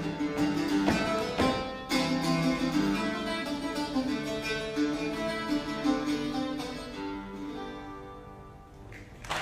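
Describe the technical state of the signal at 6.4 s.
At 6.4 s the signal runs cleanly, with no dropout, clipping, glitch or other technical fault to be heard at that point.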